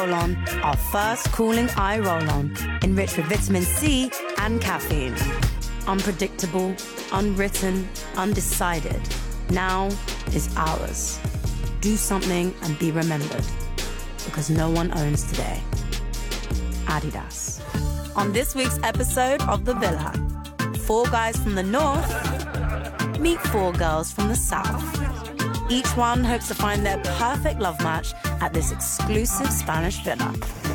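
No technical faults are audible anywhere in this audio.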